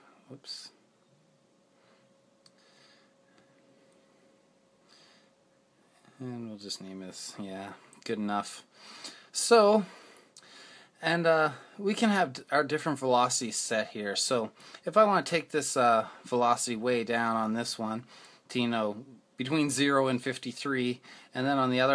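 No technical faults are audible.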